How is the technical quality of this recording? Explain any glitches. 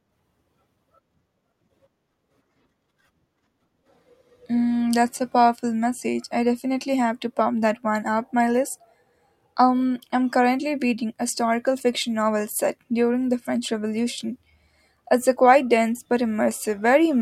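Nothing here sounds like a glitch; the speech runs along steadily without any dropouts, clicks or stumbles to point to.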